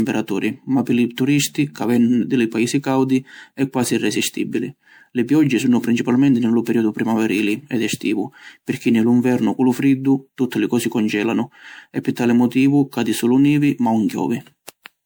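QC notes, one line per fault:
Throughout, generation loss: the speech has a swirly, hollow, smeared quality well beyond what a single 128 kbit/s MP3 pass would leave, and consonant attacks are blurred. This is likely from repeated lossy coding, something like seven MP3 decode-and-encode cycles, where each pass quantises again on a shifted frame grid, so its noise and spectral gaps pile on top of the last.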